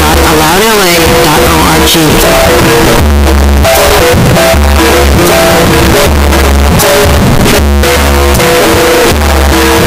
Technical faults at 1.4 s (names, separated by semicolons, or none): signed and unsigned mixed up